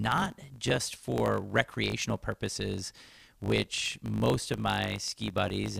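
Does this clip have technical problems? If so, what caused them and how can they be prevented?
Yes. A block size mismatch (truncated) runs throughout: each written block, which points to 1024 samples, is cut short and its tail discarded. The result is a 50 Hz buzz and speech 1.07 times faster with its timbre unchanged. The waveform jumps every 20 ms, and the spectrogram shows evenly spaced vertical lines. Matching block sizes between stages prevents it.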